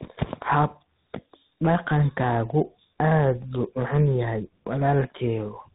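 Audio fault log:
Throughout, tandem speech coding: the speech passed through a chain of separate speech codecs, GSM full rate at 13 kbit/s, then G.711 mu-law at 64 kbit/s, then CVSD at 64 kbit/s, decoded and re-encoded at each hand-off. Two of these stages are lossy speech coders, and the CVSD stage re-codes the GSM output, so the errors stack. The result is rough, muffled and warbly, with nothing above 3.8 kHz.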